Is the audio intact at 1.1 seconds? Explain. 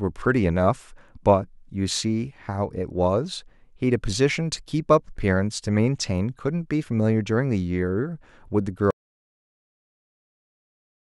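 Yes, the speech at 1.1 seconds is intact, with no dropout, click, distortion or other fault at that moment.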